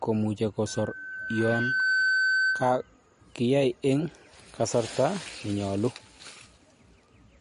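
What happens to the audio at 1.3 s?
At 1.3 s you're right in the middle of a loudspeaker feedback squeal that runs from about 0.66 s to 2.89 s. A mic is hearing the speaker it feeds, and at 1.5 kHz the loop gain tops one, so that tone keeps feeding itself. It swells over roughly a second and a half into a steady whistle, sitting a few dB above the speech, and only drops away at 2.89 s.

Underneath that, the whole clip has a watery, swirly quality, with smeared consonant attacks and nothing at all above 10.6 kHz. That's likely MP3 compression at a low bitrate, around 40 kbps by the sound of it. Short of bits, the encoder chops the treble at a fixed point and drops weaker frequency lines, which flicker in and out from frame to frame and give that underwater texture.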